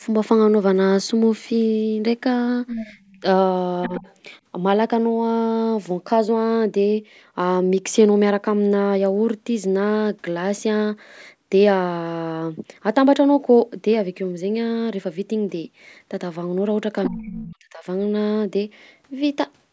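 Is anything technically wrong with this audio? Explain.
Yes, this speech clip has three kinds of echo-cancellation faults.

Other side's voice leaking through, at 2.67–2.9 s, 3.83–4.15 s and 17.05–17.25 s: a second voice is audible behind the talker, roughly 10 dB below the speech in the first scrap, about 20 dB below in the second and about 15 dB below in the third. The likely cause is that the far end was playing on a loudspeaker and the echo canceller failed to subtract all of it from the microphone signal.

Background gated by the echo canceller, at 2.92–3.2 s: just after the first leaked scrap, the room tone sinks by about 13 dB for around a fifth of a second in total and then returns. The canceller's suppressor clamped the microphone while the loudspeaker was active, so the background dips and recovers once it releases.

Speech suppressed in double talk, at 3.88–4.02 s and 17.09–17.84 s: the talker's own voice drops out while the other side is heard. 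In the first case it is a brief dip of roughly 10 dB lasting well under a tenth of a second. In the second, the voice falls by around 35 dB for most of a second. The canceller likely could not separate near-end speech from echo during overlapping talk, so it attenuated both.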